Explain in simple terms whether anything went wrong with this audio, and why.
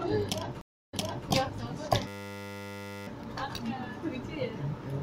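From 0.61 to 1.29 s the sound drops out for about a third of a second, then resumes 0.36 s earlier, repeating a moment. That's a stream reconnect: the connection broke and playback restarted.

From 2.07 to 3.07 s there's a steady buzz. It is a system hang loop: the computer froze while the sound hardware replayed one 10 ms scrap a hundred times per second.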